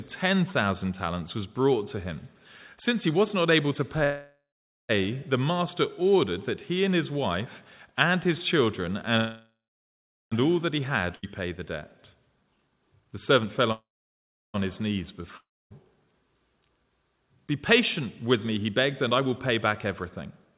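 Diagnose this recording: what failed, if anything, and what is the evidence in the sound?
Network and jitter buffer: call audio freezes at 4.04–4.91, 9.17–10.34 and 13.72–14.56 s. The last sound is stretched, fades to silence, then resumes intact, likely from delayed packets draining the buffer.

Jitter buffer: a skip ahead at 11.16 s. Playback jumps forward with an almost direct join, dropping about a second of audio while later audio was already waiting.

Jitter buffer speed-up: 12.36–13.71 s runs at 143% with pitch unchanged, trimming about half a second. A milder 105% from 17.72 to 20.53 s trims about 150 ms.

Network: a long network dropout at 15.37–15.72 s. The fill fades to silence and 340 ms is never heard, likely lost in transit. The band stops at 4 kHz, consistent with a G.711 call codec.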